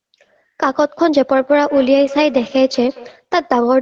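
From 1.42 s to 3.32 s the speech picks up trailing repeats spaced roughly a fifth of a second apart, thinner and more ringing than the original, peaking about 15 dB below the speech. That pattern is feedback echo between two devices. Two devices in the same room sit on one call, and one plays out what the other's microphone sent. That microphone hears it and sends it back, and neither device's echo canceller can remove sound played by the other.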